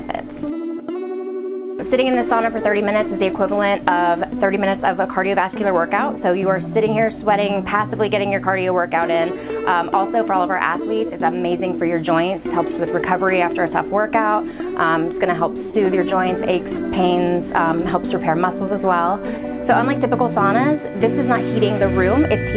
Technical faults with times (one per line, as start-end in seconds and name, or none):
15.70-15.74 sound dropped by the voice detector